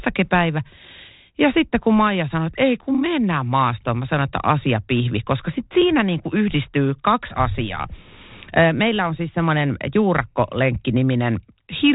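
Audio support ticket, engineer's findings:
Engineer's findings: no fault found in the speech, which carries the normal band limit of a 32 kbit/s G.726 ADPCM path with nothing above 3.8 kHz.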